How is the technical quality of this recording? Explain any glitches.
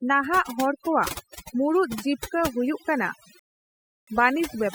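The recording has two faults: overdone noise removal across the whole speech clip, and a rebuffering stall near the end.

Overdone noise removal runs throughout. A noise reduction stage was set too aggressively, so it pushed individual frequency bands far down whenever they sat close to its noise estimate. Quiet parts of the voice were caught as well. The background drops and breaks up into twinkling specks.

A rebuffering stall occurs from 3.39 to 4.08 s, right after "ᱠᱚᱣᱟᱜ ᱢᱩᱬᱩᱫ ᱡᱤᱵᱠᱟᱹ ᱦᱩᱭᱩᱜ". The player exhausted its downloaded audio and halted until more data arrived. The sound cuts to silence for 0.68 s, then picks up exactly where it left off. No speech is lost, but the gap stretches the timing and breaks the flow.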